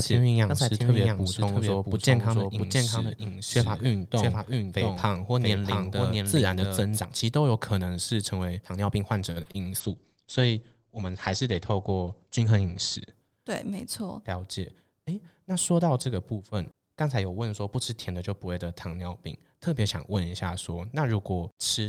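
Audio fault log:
0.00–7.00 s, doubled audio track: A second copy of the same speech is mixed in, already running when the clip opens. It trails the original by roughly 0.7 s at about 5 dB lower. This is likely a second capture path or an edit holding two copies out of step. The copy is full-band with no decay or room colour, so it sounds like a clean, quieter repeat under the main speech, and it drops out abruptly at 7.0 s.
9.31–9.50 s, short stall from a late packet: A packet arrived after it was due, and the jitter buffer ran dry. The receiver held the last sound for about 47 ms until the packet turned up, then resumed from the same point, adding that 47 ms of delay to the call. Nothing is lost, but the sound at that moment is stretched unnaturally long.
9.42–9.47 s and 9.52–9.56 s, short concealed packet loss: Two brief stretches of audio, about 40 ms and 20 ms, never reached the decoder in time. 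The receiver covered them with about 33 ms and 19 ms of synthesised continuation, extending the preceding sound before blending back into real audio. Both fall within or just after the stall, so the passage comes across as a small smear and wobble, and a short sound here can go missing.
9.82–13.91 s, call bitrate drop: The bandwidth estimate fell, and the encoder was cut from 40 kbps to 12 kbps, staying at the lowest rate for about 2.6 s. At that rate the codec quantises more coarsely and narrows the audio band from 20 kHz to 8 kHz. The speech turns muffled, rough and watery, losing its upper sibilance and air until the bitrate recovers near 13.9 s.
13.15–13.39 s, jitter buffer speed-up: The jitter buffer was holding more audio than its target, so the receiver trimmed it by cutting roughly 50 ms in small pitch-period pieces. Over this short span playback runs at about 116% speed without any change in pitch. 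The speech sounds briefly hurried, and because it overlaps the low-bitrate stretch, the rushed delivery is also muffled.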